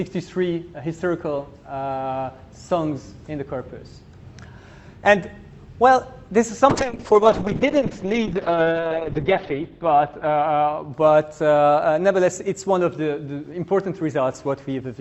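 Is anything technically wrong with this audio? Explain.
Yes: a call bitrate drop from 6.7 to 12.21 s. The encoder's bit budget collapsed, pointing to a fall from roughly 64 kbps to about 7 kbps, and audio bandwidth narrowed from 20 kHz to 8 kHz. The sound turns muffled, rough and watery, worst for about 2.7 s.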